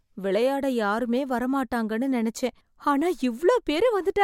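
Speech recording, no technical faults detected anywhere in the clip.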